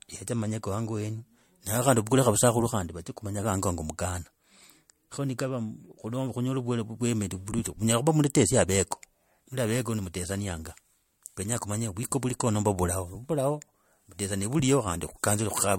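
Generation loss runs through the whole clip, from start to finish. The speech sounds swirly and hollow, with a smeared, watery texture and softened consonant attacks, and nothing is present above 16.6 kHz. The likely cause is repeated lossy coding, about three successive MP3 passes at a rate fitting roughly 70 kbit/s. Each pass requantised on a shifted frame grid, so noise and spectral gaps built on one another beyond what one encode would leave.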